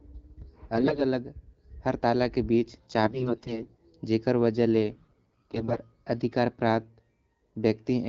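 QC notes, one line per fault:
0.76–1.02 s, 3.03–3.80 s and 4.94–5.76 s, AMR bit errors: the speech keeps roughly its pitch and loudness but turns hoarse, scratchy and gargly, with the last burst the longest. Bits in the less protected part of each frame were flipped at a rate of around 15 percent, nearer 10 percent in the last burst, while the check on the key bits still passed. The excitation pulses land wrongly and the fine pitch, gain and spectral values drift, roughening what the 12.65 kbit/s AMR-WB wideband decoder outputs.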